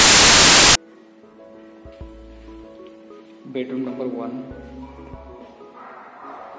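The audio opens with a burst of very loud white noise from 0.00 to 0.75 s: file tags played as audio, with an embedded cover picture read as samples. The flat, loud hiss and hard edges at file start distinguish it from a decoder error burst.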